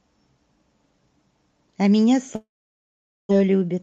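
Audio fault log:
2.35–3.33 s, long network dropout: the sound breaks off, a fading buzz continues briefly, then near-silence lasts about 0.8 s; likely packet loss, resuming after a gap.
3.41–3.80 s, jitter buffer speed-up: audio plays at about 113% speed with unchanged pitch, sounding hurried, as short pitch-period pieces are cut to drain accumulated delay.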